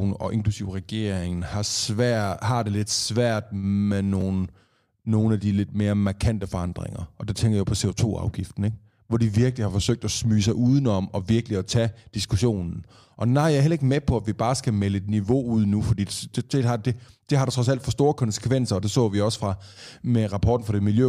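A speech recording with one fault: chunks out of order from 4.2 to 4.22 s, just after "det lidt svært med". A 10 ms block of audio was written one block late, so it plays after the block that should follow it. No audio is missing, but the sequence is scrambled, leaving a brief jumbled flicker. On a waveform there are three abrupt discontinuities about 10 ms apart.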